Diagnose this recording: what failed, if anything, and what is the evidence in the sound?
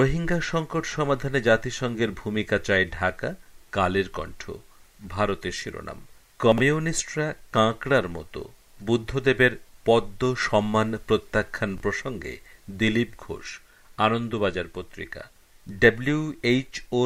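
Chunks out of order, at the driver or buffer stage: from 6.52 to 6.60 s a 20 ms chunk plays three chunks late, and at 11.78 to 11.82 s another plays one late. Each is a brief jumbled stutter. Unlike a dropout, nothing is missing.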